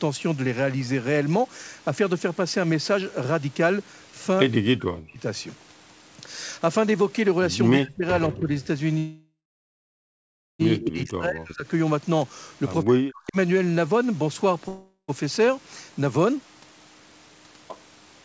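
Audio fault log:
4.65–5.21 s, 7.79–8.04 s, 8.29–8.51 s, 10.79–11.66 s, 12.84–13.37 s: speech suppressed in double talk. The level dips by up to about 40 dB, likely because the echo canceller ducked the talker during crosstalk.
8.62 s and 10.81 s: echo leak. Brief scraps of the voice return 161 ms late, at about 35 dB and 15 dB below the speech, likely from residual loudspeaker echo passing the canceller.
8.98–10.61 s and 14.68–15.10 s: call audio freeze. Gaps of 1.61 s and 0.40 s, the first mostly silent, after which the audio resumes with nothing lost, likely from jitter-buffer underrun while packets were delayed.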